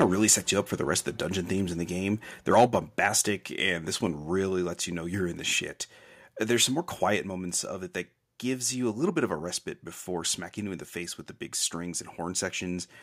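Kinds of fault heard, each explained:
microphone overload: Peak tops are sheared off, adding a harsh crackle at the very start, just before and after "of really", and again from 2.57 to 2.75 s, about 2 to 4 dB past full scale, likely from excess input gain, with grit confined to peaks.
microphone volume stepped down: Voice and background together drop by about 4 dB in one instant step at 2.67 s, inside the last overload, and at 7.17 s between "some more" and "moments of it that", likely the software cutting input gain. Unlike a fade, there is no ramp.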